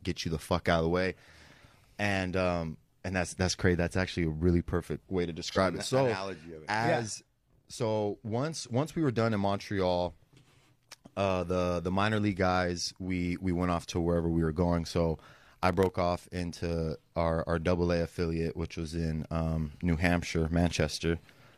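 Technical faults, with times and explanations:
5.51–5.58 s, AAC frame loss with concealment: right after "really perfect way to", one lost frame, about 43 ms, gets patched from the previous spectrum, leaving a brief smeared, phasey blur.
15.19–15.91 s, processor overload crackle: just before "off into our our", roughly twenty tiny buffers under a millisecond each miss their deadline and drop to silence, giving a gritty crackly tear.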